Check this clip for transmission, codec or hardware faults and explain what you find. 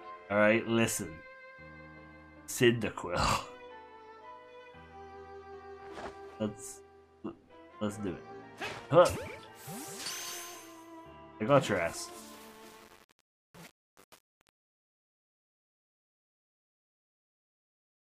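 One fault is present: truncation distortion on the fade-out, which runs from about 12.4 s to 18.1 s. From 12.41 s onward, the gain stage drops too many bits without dither; the grain suggests roughly 7-bit resolution. As the level falls, the waveform collapses into coarse steps, so the quiet tail turns gritty.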